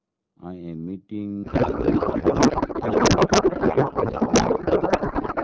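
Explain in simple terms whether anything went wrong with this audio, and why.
From 1.44 s to the end the speech becomes garbled, warbling noise. This is a codec payload misread: byte-padded data is read as tightly packed, so every field lands wrong.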